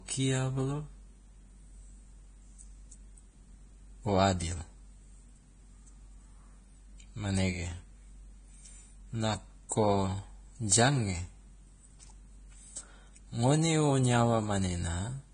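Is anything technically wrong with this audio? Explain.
Yes. Two faults are audible in this speech clip.

Throughout the clip, the speech sounds hissy and grainy, with a dull top end that stops at 9.7 kHz. Tones are roughened and onsets are blurred. This is most likely heavy Vorbis compression. The codec keeps a smooth spectral floor but quantises the residue above it very coarsely, so fine treble detail turns into noise of similar energy and the upper band is cut away. The damage fits a low bitrate of around 24 kbps.

From 9.69 to 9.72 s, a short hiss leads into a sharp onset, and the attack itself sounds softened and smeared. This is pre-echo. Because the transform spreads its quantisation noise across a whole block, noise sized for the loud attack also fills the quiet moment just before it. Here that smear runs about 25 ms ahead of the onset.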